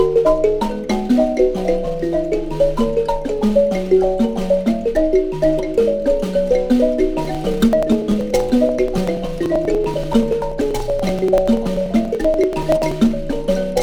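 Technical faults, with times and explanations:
7.25–12.92 s, periodic USB or driver dropouts: every 96 ms, a few milliseconds of audio are skipped as some background task stalls the stream, giving around seventy evenly spaced ticks; a spectrogram shows regular thin vertical broadband lines, and the waveform shows matching small jumps.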